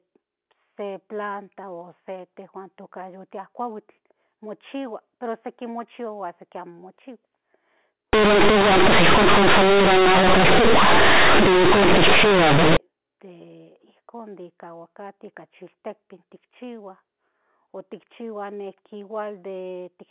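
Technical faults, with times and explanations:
8.13 to 12.77 s, companded audio read as linear: the mu-law bytes of the G.711 telephone stream, which sounds narrowband and capped near 4 kHz, which fits 8 kHz sampling, are played here as plain linear 8-bit samples without expansion. Because mu-law stores sign and a logarithmic magnitude, every polarity change jumps across roughly half the output range, so soft and loud passages come out equally large. The result is harsh, very loud buzzing distortion, with heavy noise filling the pauses.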